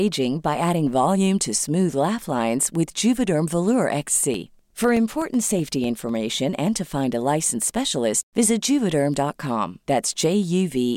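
Periodic USB or driver dropouts run from 4.34 to 6.09 s, ending before "and to find a". Every 0.125 s the USB bus or driver stalls, and about a millisecond of speech becomes silence, giving roughly fifteen evenly spaced ticks heard only over the voice.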